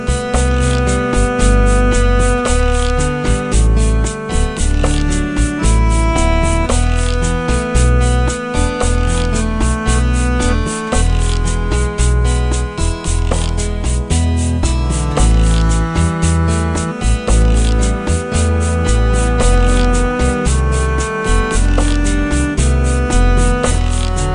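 From start to finish the clip suffers a wrong sample rate: everything runs at about two-thirds speed and sits roughly 7 semitones low, which fits 48 kHz material played back at 32 kHz without conversion. A spectrogram shows all content squeezed downward and stretched out in time.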